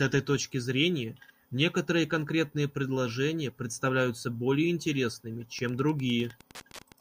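Wi-Fi interference enters at 5.57 s and continues to the end at 7.01 s. A nearby Wi-Fi radio's transmissions are being picked up and rectified by the audio circuitry, so each beacon the radio sends becomes an audible click. The beacons arrive every 102.4 ms, giving a steady ticking just under ten times a second. The ticking sits roughly 25 dB below the speech.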